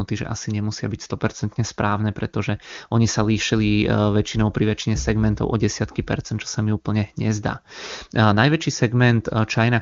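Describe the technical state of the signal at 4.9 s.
At 4.9 s the speech is intact, with no fault present; it passes through an AMR wideband (HD Voice) codec at what sounds like its upper rate range, where any coding damage is faint at most.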